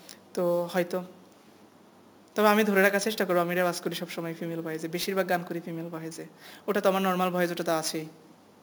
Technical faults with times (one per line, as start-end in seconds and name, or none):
0.00-8.62 imaging from sample-and-hold upsampling